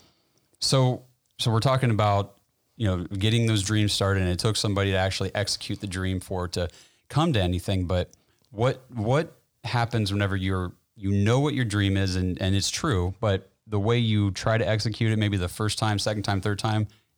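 From 13.08 to 15.08 s, de-emphasis was applied wrongly: a treble-cutting filter intended to reverse pre-emphasis acted on speech that carried no such boost, or the correction ran a second time. The result is a smooth downward tilt across the upper spectrum, about 8 dB lower at 10 kHz than at 1 kHz. For those two seconds the speech turns dull and muffled, losing crispness in its sibilants and consonant edges.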